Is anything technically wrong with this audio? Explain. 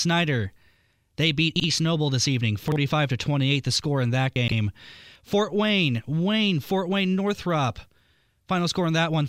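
Yes. The speech has chunks out of order at three points: 1.56 to 1.64 s, 2.68 to 2.76 s, and 4.36 to 4.52 s. Each spot is built from 40 ms chunks. In the first two, one chunk plays one step late, after the chunk that should follow it. At 4.36 s a chunk is three steps late, so the disorder spans 160 ms. Nothing is missing, but each swap leaves abrupt joins. These are heard as a brief jumbled stutter.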